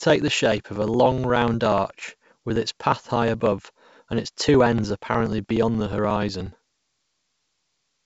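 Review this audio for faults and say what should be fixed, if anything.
Periodic USB or driver dropouts run from 0.10 s to 7.96 s: every 0.06 s roughly 4 ms of speech is skipped, well over a hundred times, giving evenly spaced ticks only while sound is present. The strict spacing separates this from random packet loss. The wideband coding, with nothing above 7.7 kHz, is not at fault. To prevent it, use a dedicated USB port and a larger driver buffer, and stop the background task that stalls the bus.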